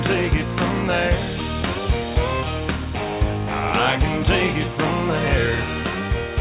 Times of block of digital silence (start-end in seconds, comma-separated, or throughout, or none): none